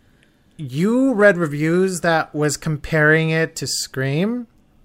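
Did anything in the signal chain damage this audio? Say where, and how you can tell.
No, nothing in this speech recording stood out as a problem on listening.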